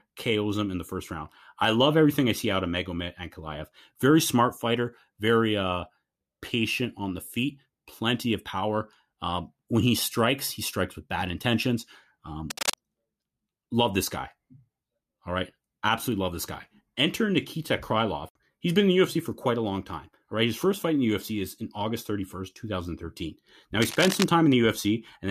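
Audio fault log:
12.50–12.74 s and 23.81–24.24 s, cable scratch noise: a worn cable or connector was likely being moved, its contact resistance jumping erratically, so dense, ragged bursts of crackling noise nearly as loud as the speech rasp over it, the second lasting about twice as long.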